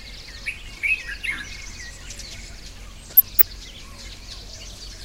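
A recording of everyday sounds with DAB burbling from 3.03 to 3.44 s: a bubbling, squelchy texture with brief chirps. Residual bit errors, at a rate of a fraction of a percent, corrupt MP2 samples and scale factors, making individual sub-bands jump in level frame by frame.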